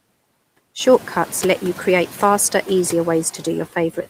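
Noise suppressor artifacts run throughout: background noise is pulled down about 18 dB between words and returns under speech, unlike a gate's abrupt cut, and the room noise rises roughly 11 dB near 1 s.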